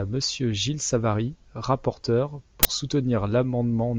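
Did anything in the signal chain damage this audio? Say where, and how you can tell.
Yes, at the driver or buffer stage: an uninitialised buffer plays from 2.63 to 2.65 s as a sudden, very loud burst of digital noise. One 20 ms block was sent out before the speech was written into it, so stale memory became samples, showing as a full-band vertical stripe and a dense waveform block.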